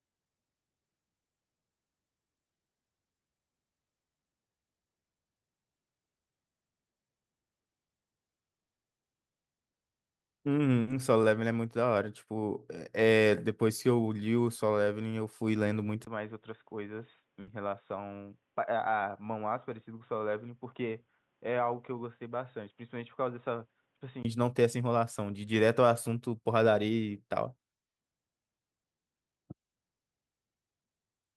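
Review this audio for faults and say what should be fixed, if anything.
A likely long network dropout hit at 8.65 to 8.86 s: the stream stopped delivering audio, so the receiver fell silent for about 180 ms before resuming, with about 180 ms of speech gone. A larger jitter buffer, redundancy or forward error correction on the link would help ride out gaps like this.

A burst of packet loss occurred twice, at 10.81 to 10.90 s and at 17.41 to 17.50 s. A run of packets never arrived in time, so the receiver filled 60 ms with a decaying continuation of the preceding sound, and the speech skips ahead by that amount. Forward error correction or packet redundancy would let the receiver recover short losses like these.

At 16.05 s the input likely switched to a poorer device, such as a headset call profile, with about 20 ms of silence at the changeover. Until 24.25 s nothing reaches above 3.8 kHz, the speech sounds dull and boxy and roughly 10 dB quieter, and the background noise changes. 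Pinning the input to the intended microphone and disabling automatic device switching would prevent this.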